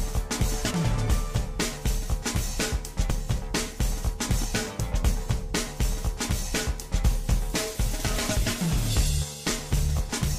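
At 0.70, 3.10 and 8.35 s, compressed frames are skipped: roughly two, two and three 26.1 ms frames drop out, jumping the audio ahead about 50–70 ms.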